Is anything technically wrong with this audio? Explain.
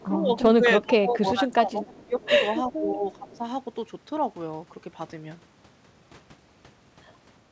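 Yes, the speech shows two echo-canceller faults.

Echo leak: the far end was likely playing the call on a loudspeaker, and its echo canceller let part of the returned signal through. The result is brief, faint copies of the speech arriving 364 ms late, at 0.00 to 0.06 s, 1.96 to 2.04 s and 2.23 to 2.29 s. Each scrap sits well below the main speech, roughly 30 to 35 dB down, so it registers as a faint trailing fragment rather than a clear repeat.

Speech suppressed in double talk: both sides were talking at once, and the echo canceller could not tell the local talker from the loudspeaker echo, so it likely attenuated everything to be safe. The speech sinks noticeably at 0.04 to 0.31 s (around 10 dB), 0.82 to 2.21 s (around 20 dB, the deepest and longest dip) and 2.77 to 3.43 s (around 15 dB), sounding pushed back while the overlap lasts. All of this reaches the listener through a G.722 call path, whose band stops at 8 kHz.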